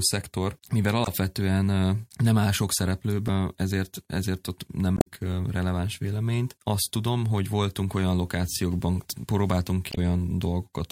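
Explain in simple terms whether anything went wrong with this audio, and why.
Yes: damaged data in a compressed stream makes the decoder lose its place, causing brief blips at 1.04, 3.25, 4.95–5.07 and 9.89–9.98 s in this speech.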